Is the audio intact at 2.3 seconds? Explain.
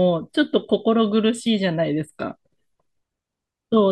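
Yes, the speech at 2.3 seconds plays through intact, with no dropout, click, distortion or other fault at that moment.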